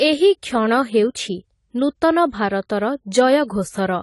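Throughout, the speech sounds dull, smeared and fizzy, with nothing above 11.5 kHz, likely AAC compression, which fits a 32 kbps bitrate.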